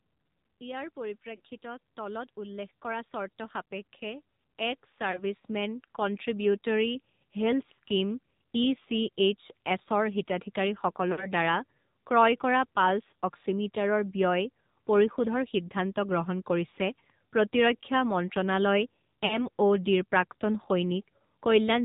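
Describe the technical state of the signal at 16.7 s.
At 16.7 s a single speech frame drops out, a case of lost AMR speech frames. The decoder has no valid data for that 20 ms slot, so it repeats the previous pitch and vocal-tract settings at reduced gain. It sounds like a tiny dip or a brief warble. On the waveform the envelope sags for about 20 ms. On the spectrogram the harmonic pattern of the preceding frame is held flat and slightly fainter before normal detail resumes.

Around that moment, as everywhere in the clip, the AMR narrowband mobile codec is plainly audible. Nothing above 4 kHz survives, and the speech has the buzzy, synthetic quality of a low bitrate, which fits the 7.4 kbps mode. A pulse-driven vocal-tract model rebuilds the voice, so fine texture is lost. A spectrogram shows a hard ceiling at 4 kHz, with smeared, blocky harmonics below it.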